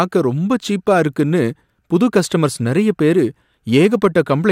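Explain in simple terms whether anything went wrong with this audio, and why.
Near the end, from 3.76 to 4.51 seconds, right after "கஸ்டமர்ஸ் நறைய பேரு", the speech shows hard clipping. Here the sound got slightly too loud for the recording chain to pass. The loudest moments had their tops sliced off flat. Those flat edges add sharp, high-pitched energy that wasn't in the original. Because the overload is small, you hear brief crackle on the strongest syllables rather than constant fuzz.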